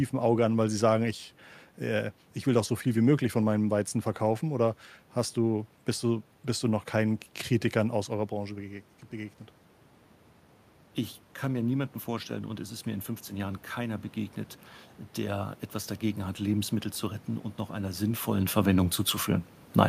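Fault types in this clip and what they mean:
Automatic gain rising: the automatic gain control sensed the input falling by about 12 dB and responded by slowly increasing its gain, by about 3 dB, between 11.41 and 14.07 s. Because the boost acts on everything the microphone picks up, the voice and the room noise behind it swell together over those 2.7 seconds. The rise covers only part of the drop, so the level stays lower than before.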